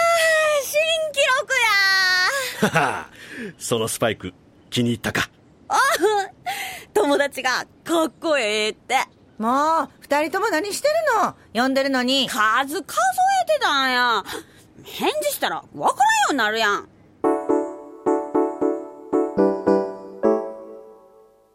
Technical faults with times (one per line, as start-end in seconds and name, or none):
none